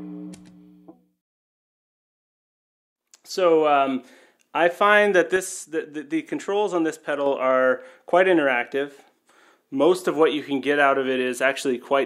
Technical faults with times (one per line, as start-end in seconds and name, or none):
5.36-7.26 sudden gain jump